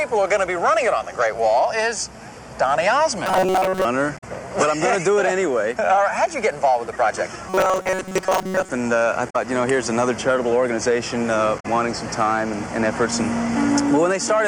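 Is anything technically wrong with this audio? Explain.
Yes, the audio has two kinds of fault: two stretches of robotic sound from repeated short buffers, and three brief disturbances from damaged data in a compressed stream.

From 3.26 to 3.85 s and again from 7.49 to 8.69 s, the sound turns into a rigid, metallic buzz at 188 Hz that tracks the original only loosely. The likely cause is new audio arriving too seldom, so the playback side keeps re-sending its last short buffer, for roughly 70 percent of the time in these stretches, while the real audio is skipped. A 188 Hz repetition rate fits a buffer of about 5.3 ms.

At 4.17 to 4.24 s, 9.29 to 9.36 s and 11.59 to 11.66 s there are short disturbances in the sound, each about 70 ms long. These come from damaged data in the compressed stream. Some of the encoded data there is corrupt, so the decoder misreads or discards those frames, loses its place in the stream and has to resynchronise on the next valid frame header before normal audio resumes.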